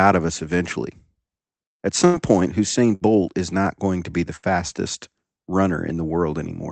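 Bursts of packet loss at 2.05 s, 2.95 s (before "is not going to") and 4.36 s (after "going to be the"): the last sound is held and faded rather than silenced, then skips about 60 ms ahead.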